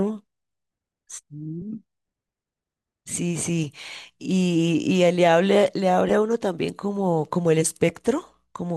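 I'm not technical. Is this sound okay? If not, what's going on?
Yes, nothing stood out as a problem when listening to this recording.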